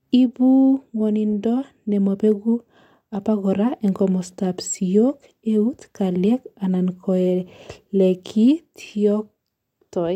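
Listening through the speech, nothing stood out as a technical fault at any point.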